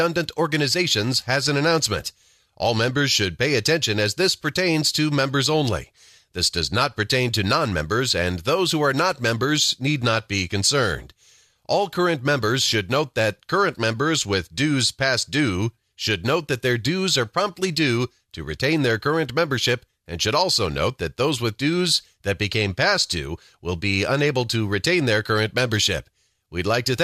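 No technical faults are audible anywhere in the speech.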